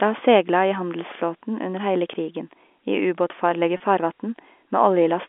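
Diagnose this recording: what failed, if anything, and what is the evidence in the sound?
At 3.77 s the speech briefly holds on a buzzy note: network packet loss with pitch repetition, the last pitch period replayed to bridge a 30 ms gap.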